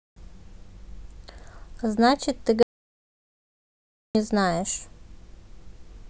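At 2.63 s the input signal was likely lost, through a dropped link or device, while recording carried on writing silence: an audio dropout to silence. The speech cuts off abruptly into dead silence with no room tone, returning mid-flow at 4.15 s, with about 1.5 s missing.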